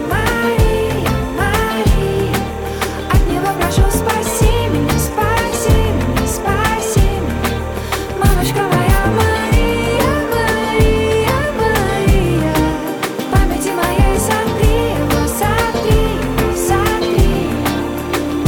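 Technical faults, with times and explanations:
Throughout, timecode bleed: 30 fps linear timecode leaks in about 25 dB below the sound, its square wave switching near 1 and 2 kHz into a chirping warble.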